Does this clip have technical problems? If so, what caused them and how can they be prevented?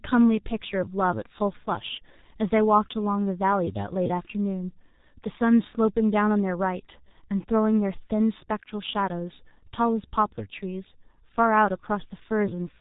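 Yes. The speech is muffled and hoarse throughout, with nothing above 3.8 kHz and smeared consonants, which fits heavy G.723.1 codec compression near 6 kbit/s. Use a wideband codec at a higher bitrate.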